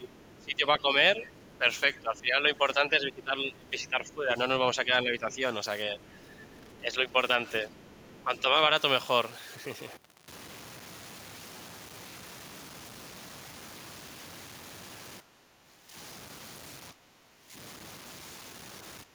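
From start to finish, the audio was likely reduced to very few bits and truncated rather than dithered, which fits a 7-bit path. The low bit depth without dither leaves a rounding error that tracks the signal instead of forming a steady hiss. The result is grainy distortion roughly 20 dB below the speech that roughens the quieter syllables and shifts character as the level changes.

During the first 8.7 s, the echo canceller likely lost track of which sound was its own talker and which was loudspeaker echo, so it turned both down. This speech suppressed in double talk makes the talker dip by around 10 dB, thinning or briefly dropping out for about five seconds in total across the stretch.

Over those same seconds, the canceller also likely failed to strip all of the loudspeaker playback from the microphone. The other side's voice leaking through sits faint, around 30 dB under the talker, from 0.19 to 2.2 s, briefly at 4.04 to 4.14 s, from 5.31 to 6.79 s, and from 7.75 to 8.11 s.

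Later the likely double-talk suppression returns, deeper at around 15 dB. The talker ducks from 15.2 to 15.96 s and from 16.92 to 17.54 s, and a final short dip runs from 19.04 s to the end.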